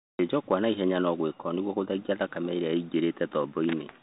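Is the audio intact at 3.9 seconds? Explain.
No. At 3.9 s it's still under the Bluetooth CVSD headset codec, which runs the whole clip. Everything above 4 kHz is gone, s sounds turn scratchy, and a grainy hiss sits underneath, which fits a 64 kbps one-bit-per-sample stream.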